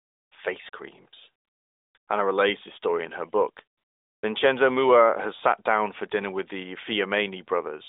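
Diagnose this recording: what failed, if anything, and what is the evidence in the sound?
In the pauses the real background drops out and a smooth, steady hiss switches in: 0 to 0.32 s before "face creams", 0.70 to 0.72 s, 1.44 to 1.94 s after "face creams", 1.98 to 2.08 s, and 3.78 to 4.22 s after "story in her book". This is AMR comfort noise at the codec stage: discontinuous transmission stopped sending speech frames and the receiver synthesised noise in their place.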